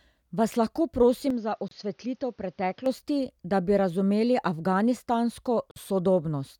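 At 1.30 s the speech abruptly goes dull and boxy. Everything above 6.6 kHz disappears, the level drops about 5 dB, and a new noise floor appears about 40 dB under the signal, with no silence at the change. That's most likely the input switched to a poorer device, and it switches back to the clearer sound at 2.86 s. During that stretch, at 1.68 s, a 29 ms hole opens with smeared edges, then the speech resumes where it stopped. That's a gap at a join of encoded pieces, from encoder delay and last-frame padding left in at a join. It happens again 4 s later at 5.71 s, this time 49 ms long, so the pieces look like they were cut every 4 s.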